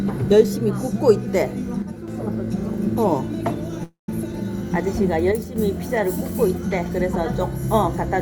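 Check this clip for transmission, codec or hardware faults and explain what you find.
Three faults appear, of two kinds.

One channel drops out from 1.82 to 2.08 s and from 5.32 to 5.56 s. The level falls abruptly by about 6 dB, and anything carried by only one side vanishes. This is likely a lost stereo channel before the mono sum.

A call audio freeze runs from 3.83 to 4.09 s. The last sound trails off into about 150 ms of silence, then resumes where it stopped, nothing missing but 0.25 s later. The likely cause is delayed packets emptying the jitter buffer.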